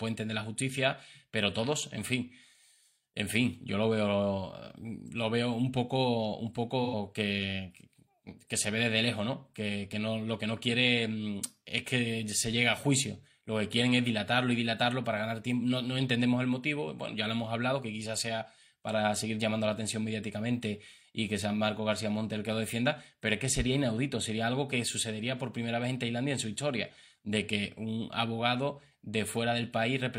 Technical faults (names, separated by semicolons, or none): AAC frame loss with concealment